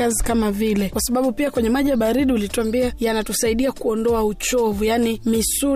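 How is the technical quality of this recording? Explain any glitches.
No glitches or technical faults can be heard here.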